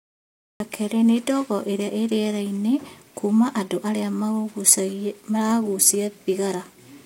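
The speech opens with a cut-off start: digital silence runs from 0.0 to 0.60 s, then the signal appears abruptly at 0.60 s, already mid-sound, just before "kerĩ nĩ ndogo i". Capture evidently began late, so there is no natural onset or fade-in.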